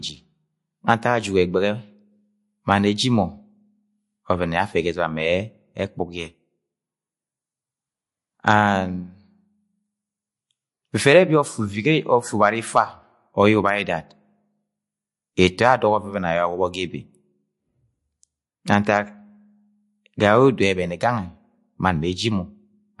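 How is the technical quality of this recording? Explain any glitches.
Technical quality is poor, with plainly audible coding damage across the whole recording. Throughout, likely MP3 compression at a low bitrate, fitting about 48 kbps: treble stops dead at 11.3 kHz, and weak components flicker, giving watery swirl. A spectrogram shows a flat ceiling with patchy holes.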